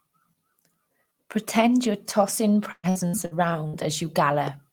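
A speech clip with two faults. From 2.71 to 3.76 s there is repeated packet loss (robotic sound). Five gaps hit the stream, the longest 120 ms. Each is patched by stretching the preceding sound. About a third of that stretch is concealed, so it turns choppy. At 4.47 to 4.49 s a single loud pop cuts in, peaking about 5 dB above the speech. It is a sharp click lasting around 20 ms, with the speech continuing beneath it. The likely cause is a sudden electrical spike, such as a switch or static discharge.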